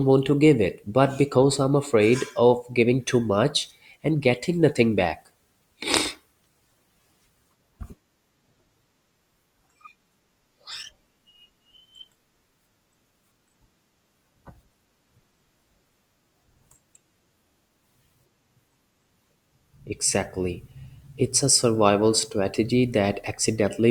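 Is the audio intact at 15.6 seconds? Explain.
No. At 15.6 s the sound sits inside an adaptive stream switch to a lower bitrate, running from 5.34 to 17.34 s, just after "and getting nothing back". Codec artefacts rise, which fits a drop from about 64 to 24 kbit/s Opus after the connection slowed. The change in quality is abrupt, while the waveform stays continuous with no gap.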